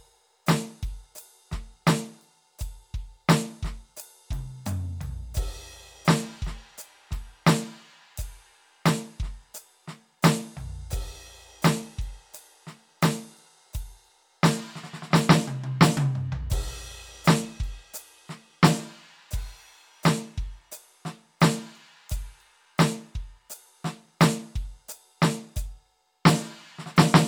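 No technical faults can be heard anywhere in this music recording.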